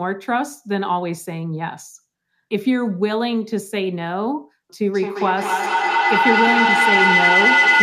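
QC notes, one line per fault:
4.81–7.82 s, feedback howl: a second device's loudspeaker re-enters the microphone with gain above unity, so repeats grow, narrowing to a tone near 2 kHz, with repeats roughly every fifth of a second. It peaks about 6 dB above the speech and lasts until the clip ends. A spectrogram shows a thickening horizontal line near 2 kHz, and the waveform shows a swelling envelope.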